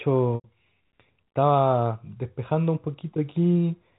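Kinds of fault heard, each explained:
Packet loss with pitch repetition: about 90 ms drops out from 0.35 to 0.44 s, which fits nine 10 ms packets. The last pitch period gets looped into a brief buzzy hold that fades over roughly 50 ms into silence, then the speech cross-fades back.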